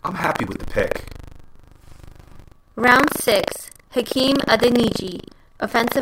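Buffer tearing throughout: read and write positions cross each period, splicing in slivers of older audio, giving the speech a steady 25 Hz robotic rattle.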